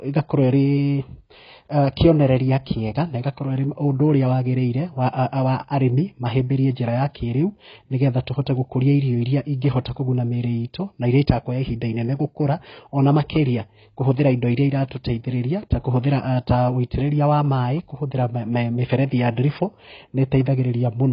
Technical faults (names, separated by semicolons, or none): AAC compression